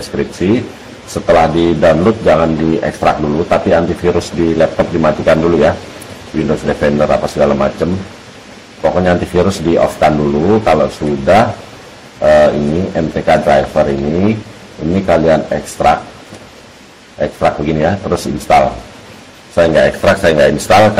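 Hard clipping runs through the whole clip, from start to finish. The audio reaches a stage driven about 15 dB beyond what it can pass, so every peak that exceeds the ceiling is sliced off flat, with roughly one sample in twenty affected. Those squared-off tops generate harmonics reaching well up the spectrum, and with an overload this heavy the result is a harsh, buzzing fuzz on every loud passage rather than occasional crackle.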